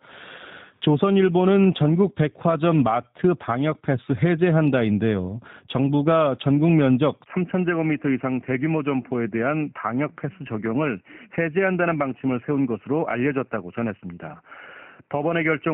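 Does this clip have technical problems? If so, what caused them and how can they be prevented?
Yes. The G.729 codec is present from start to finish. At 8 kbit/s it rebuilds the speech from a vocal tract filter, a pitch predictor and a few pulses per frame. That leaves it plainly rough and slightly synthetic, with nothing above 4 kHz. Simple band-limiting would dull the sound without that buzzy roughness. Using a wideband codec such as Opus at a higher bitrate would prevent it.

At 7.24 s, a 20 ms silence is followed by a sudden change in the sound. From there to the end, the top of the band falls to 3 kHz, the level drops by about 5 dB, and a new noise floor sits roughly 45 dB below the speech. The likely cause is an input switched to a poorer device. Unlike the codec damage, this arrives as a single step rather than running throughout. Fixing the input device and turning off automatic headset call-profile switching would prevent it.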